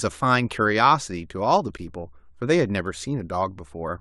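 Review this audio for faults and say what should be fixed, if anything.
At 1.77 s the speech stops for 12.4 ms, with hard edges on both sides. This is a gap between stream segments: the time stamps of adjacent segments don't meet, so the player fills the hole with silence. No audio is lost; it is only pushed back. To prevent it, set segment time stamps so each segment begins exactly where the previous one ends.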